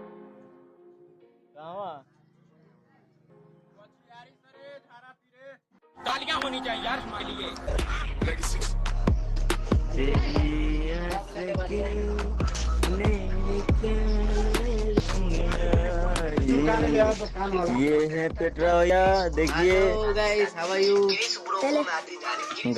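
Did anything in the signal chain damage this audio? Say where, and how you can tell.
Yes. At the driver or buffer stage, the likely cause is a recorder or processor that loses a short piece of audio each time it closes one chunk and opens the next. About a tenth of a second goes missing at 3.30, 7.20, 11.10, 15.00 and 18.90 s, and the two sides are butted together with no silence between them. The steady spacing of roughly 4 seconds between these skips points to fixed-length chunks.

At the network and codec stage, an adaptive stream switched to a lower-bitrate version from 7.03 to 18.73 s, which fits a step down from around 64 kbit/s Opus to about 16 kbit/s. Throughout that stretch nothing is present above 12.3 kHz and codec artefacts rise. The quality changes abruptly at both ends with no gap, which is the signature of a rendition switch after the connection slowed rather than a dropout.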